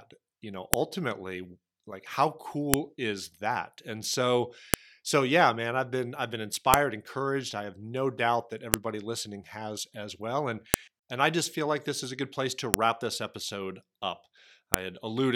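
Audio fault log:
0.74, 2.74, 4.74, 6.74, 8.74, 10.74, 12.74, 14.74 s: file header played as audio. A sharp, loud snap cuts into the speech every 2 s regardless of what is being said, for example just before "so yeah man I've" and "and I just feel", and right after "this episode up". The speech arrives as 2 s pieces joined without stripping their WAV headers, so those few dozen header bytes are played as samples, each a brief click at a piece boundary.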